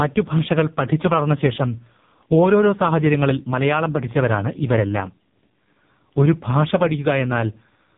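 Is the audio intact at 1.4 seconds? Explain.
No. Throughout the clip, including 1.4 s, AMR narrowband mobile codec coding at a heavily starved rate (consistent with roughly 5 kbps) cuts everything above 3.8 kHz and leaves the speech buzzy and synthetic.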